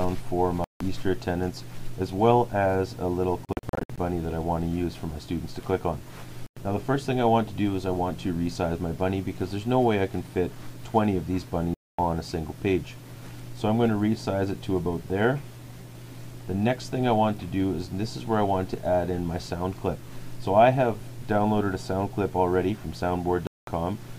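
The sound cuts to silence at 0.64, 3.45, 6.46, 11.74 and 23.47 s, for 0.1 to 0.28 s each. At 3.45 s, short holes scatter over half a second. Each time it resumes further on, as if it played through. A Bluetooth dropout is the likely cause.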